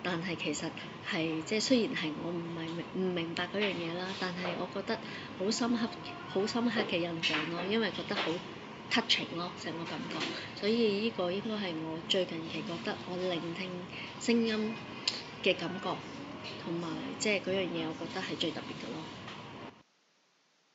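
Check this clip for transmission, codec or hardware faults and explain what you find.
No transmission, codec or hardware faults can be heard, and the signal comes through intact with no dropouts, glitches or distortion.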